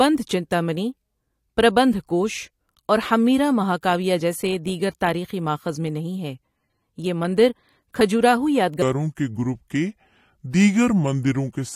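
A section at the wrong speed runs from 8.82 s to the end of this speech clip at 11.75 s: playback drops to 0.739 times the original rate, so the voice turns slow and deep, about five semitones lower, likely because that stretch was played against the wrong clock.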